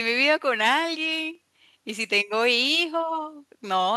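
A short speech recording with no audible technical fault anywhere in the signal.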